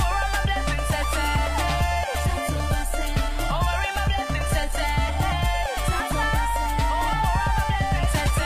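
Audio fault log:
1.66–5.66 s: adaptive stream at a lower bitrate. For these 4 seconds the sound switches abruptly to a coarser encoding, with more codec artefacts and nothing above 14.9 kHz, which fits a player stepping down from roughly 96 kbit/s to a low-rate mode near 20 kbit/s after the connection slowed. Unlike a dropout or packet loss, there is no gap or glitch, and unlike a clip encoded at a low bitrate throughout, quality recovers just as suddenly at 5.66 s.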